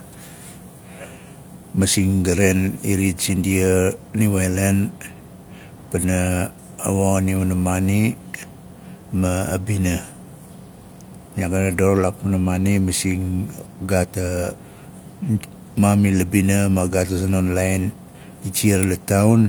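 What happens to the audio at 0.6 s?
Nothing goes wrong at 0.6 s; the speech carries on intact through that moment.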